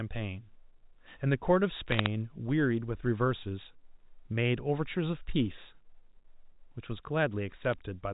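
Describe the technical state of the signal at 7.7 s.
Bit errors on a digital phone line occur from 7.65 to 7.74 s. Flipped bits in the G.711 stream, at a rate of roughly a tenth of a percent, each corrupt a single sample. Hits on sign or high-order bits produce sharp ticks, heard as brief crackle over the speech.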